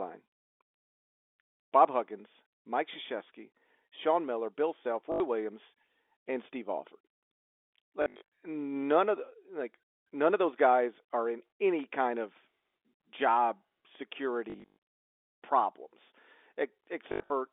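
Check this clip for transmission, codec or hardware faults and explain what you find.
Four dropouts of the same kind stand out in this telephone-band speech, carried over G.711 mu-law with the line limited to roughly 250 Hz to 3.6 kHz.

Packet loss with last packet repeated occurs at 5.12 to 5.2 s, 8.02 to 8.22 s, 14.5 to 14.76 s and 17.12 to 17.3 s. The receiver replays the last good packet until new ones arrive. Runs up to 120 ms buzz near 50 Hz, which fits 20 ms packets, giving brief robotic stutters.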